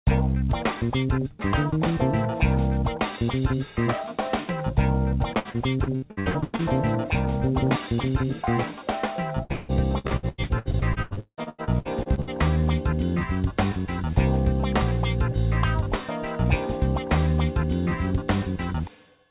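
From 5.39 to 6.62 s, and again from 9.44 to 12.30 s, the sound turns choppy and robotic as repeated packet loss punches holes in it. Each hole is filled by stretching the last received sound, covering about 39% and then 45% of those stretches, with gaps up to 94 ms and 177 ms. The call path's band limit leaves nothing above 4 kHz, which fits a G.711 codec.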